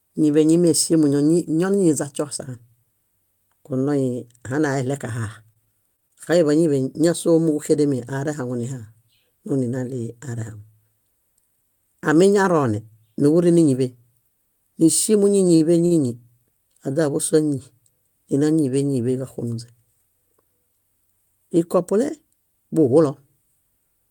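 From 5.21 to 6.28 s, packets went missing or arrived late again and again, giving repeated packet loss with a robotic sound. Eight separate gaps fall in about a second, the longest roughly 22 ms. Each was patched by extending the preceding sound, about 129 ms in all, while some 80 ms of real audio is gone. The speech turns choppy, with fragments dropped out.

Near 15.5 s comes a cluster of short stalls from late packets, at 15.47 to 15.51, 15.55 to 15.62 and 15.86 to 15.93 s. Each time the jitter buffer drained before the next packet landed, so the receiver held the last sound, for 17, 50 and 52 ms, then resumed where it left off. Nothing is lost, but the speech briefly hangs with a faint buzz or dip.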